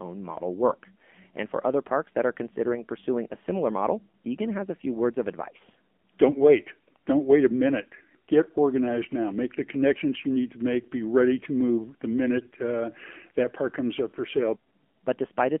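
All the way through, the speech has that flat, boxy phone sound of the AMR narrowband mobile codec. The line is squeezed to roughly 200 Hz up to 3.4 kHz, so there's no air or sparkle on top and not much body underneath. The codec damage is plainly audible too: a buzzy, synthetic edge on the voice, the kind you get when the vocal-tract model is running at a low rate, which fits something around 7.4 kbps.

Then there are two short bursts of AMR bit errors. The first runs from about 6.28 to 6.43 s, right after "few words of advice", and the second from about 12.38 to 12.52 s, between "ready to move the" and "uh that park comes". Each lasts about 0.14 s, which fits roughly seven 20 ms frames getting hit. The voice keeps its pitch and loudness but suddenly goes hoarse and gargly. That's what happens when the less protected bits get flipped on a weak link, around 5 percent of them. The excitation pulses land in the wrong spots and the fine pitch, gain and spectral values drift off.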